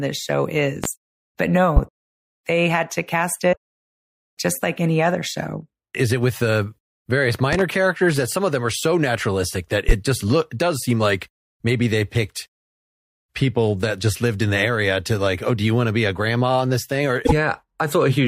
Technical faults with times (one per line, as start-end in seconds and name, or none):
0.84-0.88 loud pop
1.76-1.80 loud pop
3.52-3.57 damaged data in a compressed stream
7.53-7.63 loud pop
9.89-9.93 loud pop
17.25-17.32 damaged data in a compressed stream